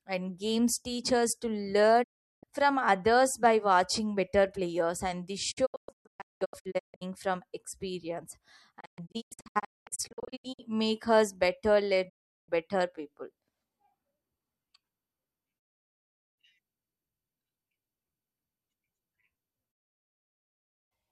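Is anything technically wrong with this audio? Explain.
Yes. Digital broadcast dropout mutes the speech at 2.02, 5.50 ("and this"), 8.79 ("from experience"), 12.08 ("make us better"), 15.58 and 19.71 s. Each time the receiver loses valid frames, fades out over 20 ms, and goes silent for 0.4 to 1.2 s in all, in single or scattered gaps. Those passages are gone.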